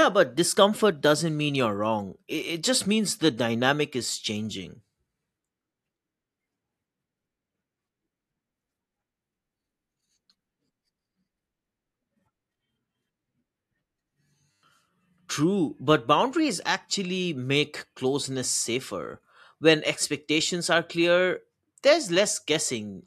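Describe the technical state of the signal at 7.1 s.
At 7.1 s the signal is intact, with no dropout, distortion, glitch or other fault audible at that moment.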